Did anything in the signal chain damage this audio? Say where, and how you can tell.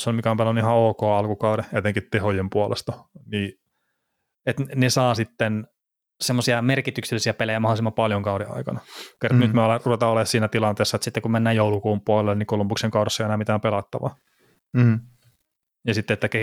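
Yes: three drift correction steps, likely clock-sync resampling at the buffer stage. The sound drops 6.4% slow, about a semitone flat, at 1.76–3.71 s, then runs 6.4% fast and sharp at 5.64–7.96 s and 11.04–11.54 s, snapping back each time.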